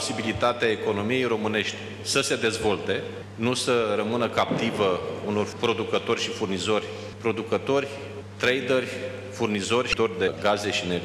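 At 9.90 s, damaged data in a compressed stream breaks the sound for about 34 ms, until 9.94 s. Bytes in the coded stream were corrupted there. The decoder misread those frames and lost sync while hunting for the next valid header. The result is a short, harsh blip.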